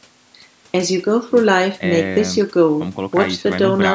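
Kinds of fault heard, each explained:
No kinds of fault are heard in this speech clip.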